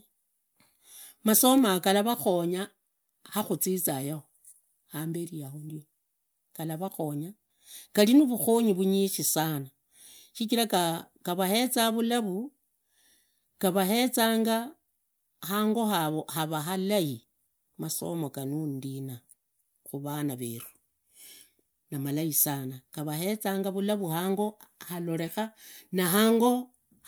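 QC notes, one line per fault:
No faults found on the speech track; nothing to log.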